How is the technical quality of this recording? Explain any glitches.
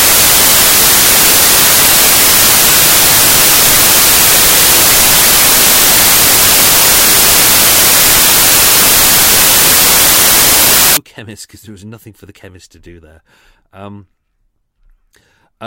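The technical quality is poor for the first two thirds of the recording. From 0.0 to 10.97 s the audio is ruined by samples built from the wrong bytes, and the speech returns only after that. The bytes of each sample were put together wrongly, through a one-byte offset, a swapped byte order or a wrong alignment. The rapidly changing low-order bits became the dominant part of every value, so the sound becomes loud broadband noise. On a spectrogram that stretch is energy smeared across the whole frequency range. On the waveform it is a dense block that bears no resemblance to the speech that follows.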